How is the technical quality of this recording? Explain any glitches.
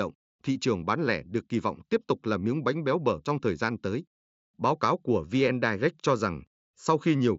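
Nothing stood out on listening to this speech recording; it has the band-limited sound of a wideband Bluetooth headset link and no glitches to explain.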